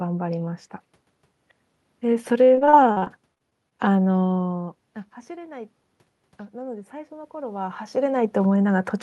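Speech with room noise carries two faults. From 2.45 to 3.73 s, repeated packet loss produces a choppy, robotic sound: about a dozen gaps, the longest 43 ms, are patched by repeating earlier audio. On a spectrogram they appear as smeared, copied frames and brief dropouts. From 6.50 to 7.86 s, the automatic gain rises by about 4 dB after the input fell by about 17 dB. The waveform envelope and background noise floor both climb gradually.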